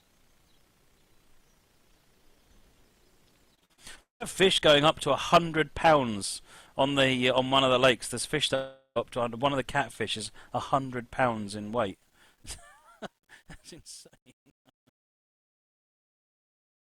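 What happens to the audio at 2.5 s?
Nothing goes wrong at 2.5 s; the audio plays through intact at that point.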